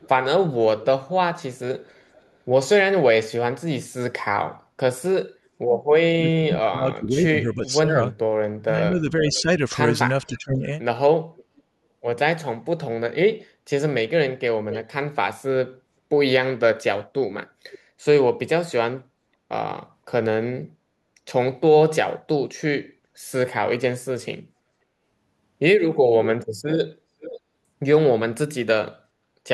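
It's a speech clip with two kinds of trouble, both pointing back to the far end's echo handling. First, echo leak: a faint delayed copy of the speech trails the talker from 0.0 to 2.36 s, then turns up in short scraps at 9.33, 11.35, 14.7, 17.72 and 27.2 s. The copy lags by roughly half a second, drifting from 506 to 534 ms across the clip. It ranges from barely there to fairly obvious, and is loudest around 14.7 s. Most likely a loudspeaker on the other side is feeding the mic and its echo canceller isn't catching all of it. Second, there's speech suppressed in double talk between 6.1 and 10.66 s. While both sides talk at once, the talker on the loudspeaker side keeps ducking and breaking up in patches adding up to about 2 s, with the deepest dips around 25 dB down. The likely cause is that the echo canceller can't tell the live voice from the loudspeaker echo and clamps down on both.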